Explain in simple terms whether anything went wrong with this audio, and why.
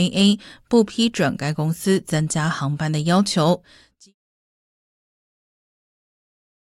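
Nothing went wrong: the speech simply fades out smoothly from around 3.5 s to 4.15 s, a deliberate edit with no click or hard edge.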